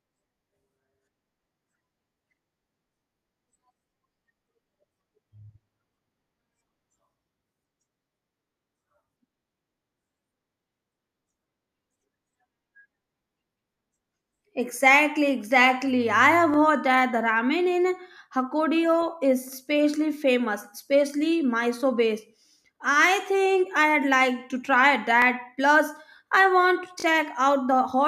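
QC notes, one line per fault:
16.54–16.56 s, 25.22–25.24 s, 27.00–27.04 s, repeated buffer: fresh audio arrived late, so a 20 ms-sized slice replayed with a hard join, once before "that the ramen", once after "I'd like to try", twice after "I want to", giving brief clicky stutters.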